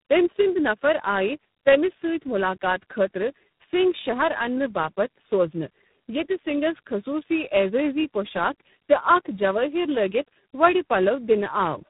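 Throughout, there's tandem speech coding: three low-rate speech coders in a row, each re-coding the last one's damage, so the speech is rough, muffled and warbly, with nothing above 3.8 kHz.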